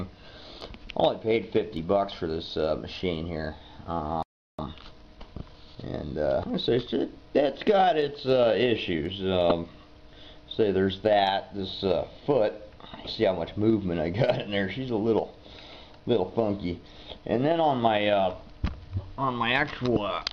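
The player most likely ran dry of buffered data, or its output thread was held up, producing a playback stall: at 4.23 s the audio cuts out in mid-flow and stays silent for about 0.36 s, until 4.59 s, when output resumes. With a backlog now built up, the player performs a time-compressed catch-up, trimming small slices from the queued audio and cross-fading across each gap. From 4.59 s to 6.89 s the sound runs about 1.15 times faster than normal while keeping its normal pitch, so it comes across as hurried. Separately, the compressed stream carries damaged data in four places, where bytes reaching the decoder were wrong or missing. Each time, the decoder misreads or rejects the affected frames, loses its place and hunts for the next valid frame header before decoding cleanly again. Each of these is heard as a brief chirp or blip: at 6.40 to 6.44 s, overlapping the end of the catch-up, at 9.50 s, at 13.04 to 13.07 s, and at 19.93 to 19.97 s. 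None of the glitches lasts more than a few tens of milliseconds.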